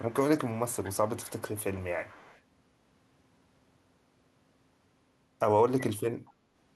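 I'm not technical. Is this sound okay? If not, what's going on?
No. There is echo leak: one end's echo canceller likely let some of its loudspeaker's sound back in, so a faint copy of the speech returns about a quarter second late, at 0.00–0.14, 0.44–1.84, 2.07–2.41 and 6.27–6.31 seconds.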